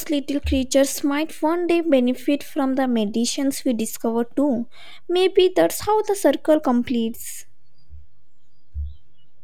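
Nothing in the speech itself betrays it, yet from start to finish the waveform sits off centre: a DC offset of about -34 dBFS. A constant shift away from zero eats a little headroom and leaves steady energy pinned at 0 Hz, below anything audible.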